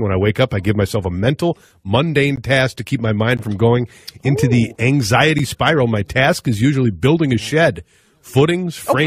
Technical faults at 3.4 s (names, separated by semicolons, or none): gap between stream segments